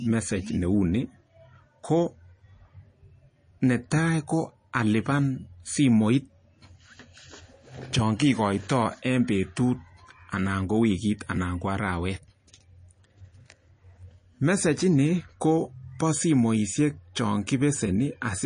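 Throughout the speech, nothing is present above 9.8 kHz and the damage is plainly audible: a watery, swirling texture with chirpy s sounds, which fits MP3 compression at roughly 32 kbps. Short of bits, the encoder likely cut the treble at a fixed point and dropped weak frequency lines frame by frame.

At 3.90 s there is pre-echo: a short hiss about 10 ms long leads a sharp attack, which sounds softened. The codec spread quantisation noise across its block, so noise meant for the loud onset spilled into the quiet gap before it.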